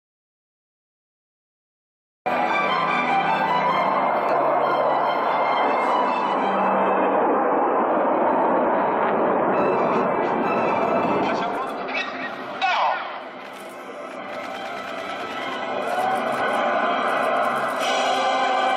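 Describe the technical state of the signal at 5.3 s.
At 5.3 s the signal is intact, with no dropout, distortion, glitch or other fault audible at that moment.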